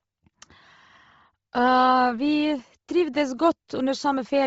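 Throughout, the speech likely passed through Bluetooth LC3 compression at a low bitrate. Nothing remains above 7.7 kHz, and heavy noise filling leaves a breathy, grainy edge.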